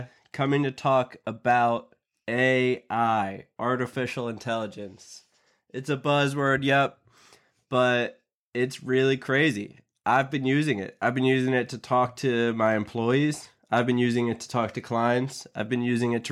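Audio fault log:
1.51 s, 9.35 s, 10.13–10.19 s, 12.65–12.68 s, 13.74–13.80 s: hard clipping on speech peaks, overdriven by about 0–2 dB. Brief flattened crests generate high harmonics, heard as short crackles, the last just before "been using it to".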